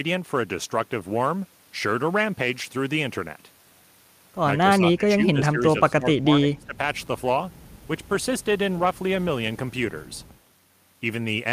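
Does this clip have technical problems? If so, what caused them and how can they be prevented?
Yes. Speech suppressed in double talk, 4.63 to 6.78 s: the speech dips by as much as around 20 dB, for about a second and a half in total. An echo canceller likely could not separate the local talker from the overlapping far-end loudspeaker echo and turned the local talker down along with it. To prevent it, use an echo canceller with good double-talk detection, or headsets, so less loudspeaker echo reaches the microphone.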